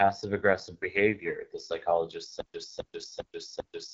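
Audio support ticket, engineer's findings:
AMR wideband (HD Voice) codec throughout, plainly audible: rough, raspy speech, coded at a rate that fits 8.85 kbit/s, one of the two lowest modes. Nothing above 7.7 kHz. The rasp from low-rate model coding distinguishes it from simple band-limiting.

Stutter with silent gaps, 2.41 s to end: a 264 ms burst repeats 4 times every 399 ms, with 135 ms digital silence between. Likely a player or stream stall replaying its last fragment. True silence gaps separate it from gapless looping.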